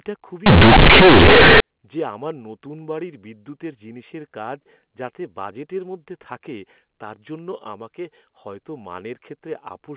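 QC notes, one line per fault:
0.46–1.60 s: companded audio read as linear. A-law bytes are played as plain 8-bit samples with no expansion, so each sign change swings about half the range and quiet sound matches loud. The result is harsh buzz. Unlike clipping, the pauses fill with loud noise too.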